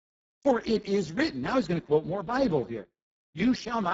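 Throughout, the Speex codec starves its excitation at a setting near 6 kbps, so the speech sounds noisy and hoarse, with nothing above 7.7 kHz.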